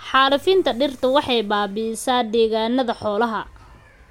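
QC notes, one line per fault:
Nothing in the speech stood out as a problem on listening.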